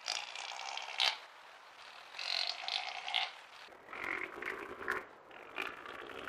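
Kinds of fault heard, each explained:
Interleaved audio read as planar: from 3.68 s to the end, each short block's alternating left-right samples are split into halves and played together at half rate, so the sound turns dull and robotic with a 172 Hz buzz, consistent with 256-sample blocks of 5.8 ms.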